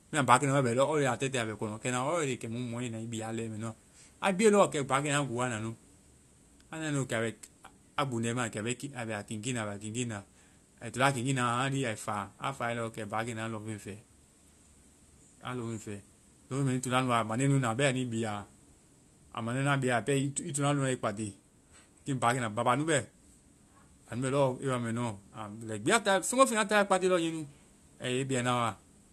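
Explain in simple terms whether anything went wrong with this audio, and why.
The speech sounds dull from start to finish, with nothing above about 12.4 kHz. This is likely low-bitrate audio saved at a high bitrate: a heavily compressed earlier copy was re-saved as a large MP3, which cannot restore the detail already lost.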